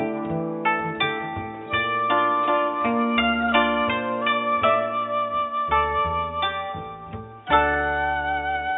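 No technical faults can be heard anywhere in the recording.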